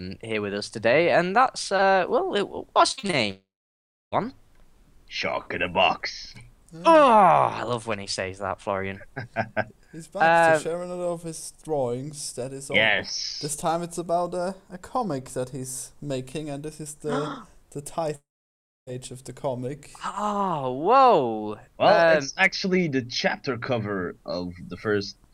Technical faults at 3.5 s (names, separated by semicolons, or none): long network dropout